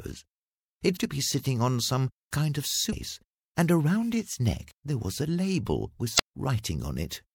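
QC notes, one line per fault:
0.96–0.98 s, 2.89–2.94 s and 6.15–6.20 s: damaged data in a compressed stream. Three short blips, lasting about 20 ms, 50 ms and 50 ms. At each point the encoded bytes are corrupt, so the decoder either misinterprets those frames or throws them out. It then has to search for the next valid frame header before it can lock on again. That brief loss of sync turns into a chirp or squawk in place of the real audio.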